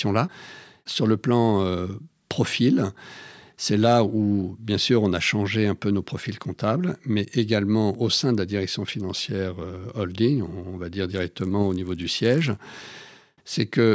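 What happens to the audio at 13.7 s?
Nothing goes wrong at 13.7 s: the speech there plays through intact, with no dropout, click or distortion.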